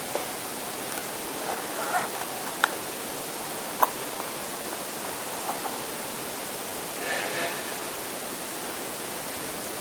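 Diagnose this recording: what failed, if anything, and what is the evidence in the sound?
A faint, uneven tempo wobble runs through the whole clip. This is clock drift between sender and receiver at the network stage: the sender's clock runs about 2% slow.

From 0.36 to 9.73 s, small hiccups recur at irregular spacing as the receiver repeatedly makes timing corrections, playing at 98% speed and adding about a fifth of a second overall.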